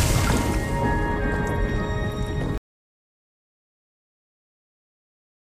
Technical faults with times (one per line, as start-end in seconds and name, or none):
2.58-5.53 audio dropout to silence